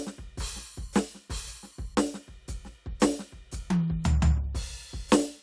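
Nothing in the music stood out as a technical problem on listening.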